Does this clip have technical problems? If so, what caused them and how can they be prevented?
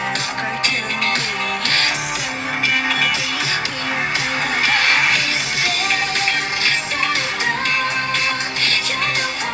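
No, there are no technical faults.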